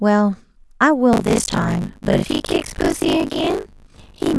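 From 1.12 s to the end, the speech takes on a rough, robotic buzz at 50 Hz, a steady rattle that rides on the sound and disappears when nothing is there to carry it. This is buffer tearing. The playback writer and the hardware reader have drifted so they cross inside every 20 ms period, and roughly half of each period replays audio from around 40 ms earlier. The hard seams at both ends of each stale stretch produce the buzz.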